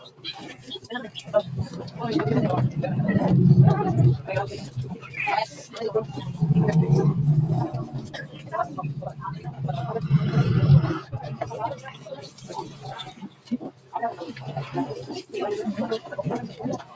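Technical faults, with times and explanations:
Throughout, noise suppressor applied to music or sounds: a speech-tuned suppressor stays engaged and mistakes steady material for noise, so the level swings by around 15 dB and the sound pumps and thins.
0.00–1.21 s, 4.57–5.12 s, 5.47–5.76 s, 6.08–6.30 s, 7.85–9.61 s, 11.01–13.93 s and 16.5 s to the end, sound cut by the noise suppressor: held parts and decays sink by about 8 to 10 dB while sharper onsets slip through, the longest stretch running nearly three seconds.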